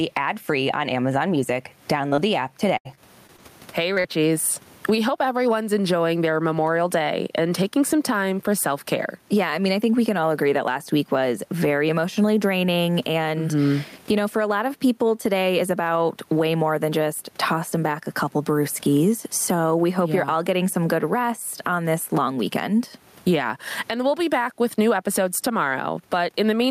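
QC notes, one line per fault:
2.09–2.13, 2.15–2.19, 3.94–3.98 and 4.00–4.06 s: short concealed packet loss. The first two fall just before "the app". About 20 ms of audio went missing in each of the first three and about 40 ms in the last. The receiver covered each hole by extending the preceding sound, pitched if voiced or as shaped noise if not, then crossfaded back, giving a brief smear or wobble. On a spectrogram each shows as a short stretch of frozen, smeared harmonics or noise that breaks the natural movement of the surrounding detail.
2.77–3.40 s: repeated packet loss (robotic sound), starting right after "the app". Four gaps totalling about 140 ms hit this stretch, the longest 75 ms, so around a fifth of the span is concealment rather than real audio. Each gap is patched by continuing the last sound before the next gap arrives, which makes the passage choppy and robotic with fragments missing. 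A spectrogram shows repeated blocks of flat, smeared harmonics alternating with real detail, and the waveform looks broken up across the span.
Throughout: gain pumping. The level keeps surging and ducking, with a swing of around 20 dB, which squeezes loud and soft passages toward the same loudness and leaves the sound squashed. The likely cause is input gain set far too high, with a fast limiter or compressor clamping down on each loud sound. On the waveform the envelope looks flattened and crowded toward a constant height. On a spectrogram the overall brightness rises and falls with the gain changes. Room noise sits about 43 dB below the speech.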